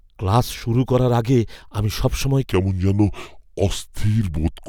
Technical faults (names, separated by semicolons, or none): section at the wrong speed